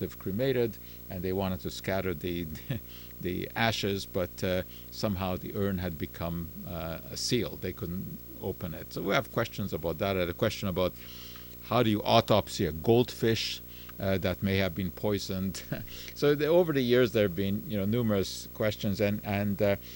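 Video or display buzz runs through the whole of this speech recording: a steady buzz at the 59.94 Hz picture field rate with hash above it, plus a thin 15.7 kHz line-rate whine, from a screen or video cable coupling into the audio, sitting around 15 dB below the speech.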